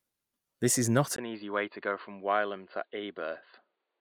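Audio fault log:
1.16–4.01 s, input switched to a poorer device: the recording input likely changed partway through, moving to a narrower-band microphone or a headset call profile. After a brief gap of about 20 ms, the speech loses everything above 4.7 kHz, so it turns dull and boxy. It also drops by roughly 10 dB in level and carries a faint new background noise, far beneath the speech, that stays to the end.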